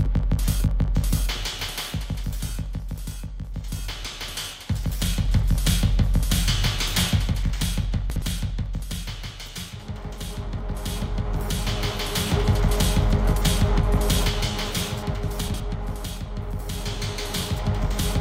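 At 8.1 to 8.22 s and again at 15.48 to 15.6 s, chunks out of order: a 60 ms block plays one chunk late, after the block that should follow it. Nothing is missing, unlike a dropout, but the swapped material jumbles briefly, with three hard joins each time.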